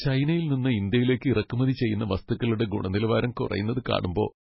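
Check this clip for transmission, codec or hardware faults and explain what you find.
One fault runs through the whole of this speech recording: heavy damage consistent with MP3 compression. Nothing is present above about 5.6 kHz, a hard treble ceiling that suggests the encoder ran badly short of bits, which fits a very low bitrate near 16 kbps. Starved of bits, the encoder likely discarded weak frequency lines, which flicker in and out between frames and leave the speech sounding watery and swirly, with chirpy, metallic sibilants and softened consonant attacks.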